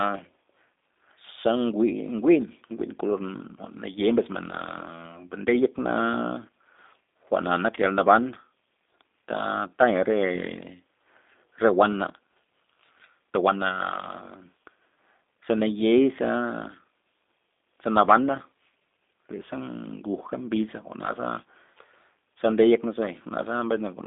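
G.729 codec damage runs through the whole speech clip. Each 10 ms frame is rebuilt from a vocal tract filter, a pitch predictor and a few pulses, which fits an 8 kbit/s G.729A stream. Nothing above 3.6 kHz or below 250 Hz survives, leaving the speech plainly rough and synthetic.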